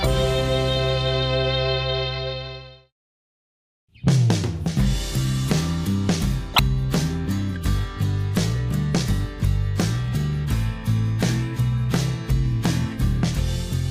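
At 6.54 to 6.59 s, a corrupt frame is decoded. Several damaged frames play anyway, misplacing energy in frequency. It sounds like a loud, sharp burst, with error peaks around -5 dBFS.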